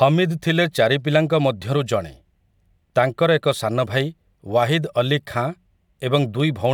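Regular ticks every 2.0 s from 0.38 to 6.40 s, each a tiny fraction of a millisecond of skipped audio: periodic USB or driver dropouts.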